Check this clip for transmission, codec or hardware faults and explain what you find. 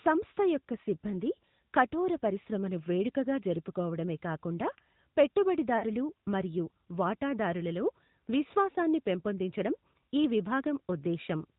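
Two faults can be heard in this speech clip.

AMR narrowband mobile codec, throughout. Nothing above 4 kHz gets through, so the speech sounds boxed-in and telephone-like. The codec models the vocal tract and drives it with a few pulses per subframe. At this quality the damage is plainly audible. Voiced sounds turn buzzy and synthetic. The degree of roughness points to a mid-rate mode, around 10 kbps. Consonants lose their crisp edges.

Lost AMR speech frames, from 5.78 to 5.84 s, just before "మరియు వాటాదారులలో విశ్వాసాన్ని పెంపొందించడం". About 40 ms of speech failed to arrive intact, which fits two dropped frames. The decoder filled the gap by repeating its last good pitch and vocal tract settings at falling gain. The result is a short smeared warble and a dip in level. The speech then resumes weak or rough for a moment.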